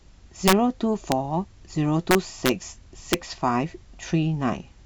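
Integer overflow cracks the speech at 0.48–0.53 s, 1.12 s, 2.11–2.49 s and 3.13 s: peaks barely over the limit, by about 2 dB at most, wrap to the opposite sign instead of flattening, giving violent snaps far harsher than clipping's buzz.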